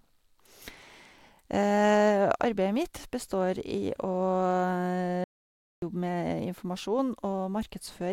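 At 5.24 s the speech drops out to silence until 5.82 s, about 0.58 s lost, with no room tone. This audio dropout to silence likely came from a lost input while zeros kept being written, showing as a flat waveform and an empty spectrogram band.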